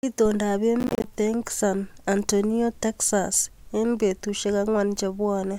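From 0.80 to 1.04 s the speech breaks into processor overload crackle. The sound fits about twenty missed buffers of around 10 ms each, every gap falling to silence with hard edges. Unlike a single dropout, this is a dense, gritty tearing that stops when the load passes.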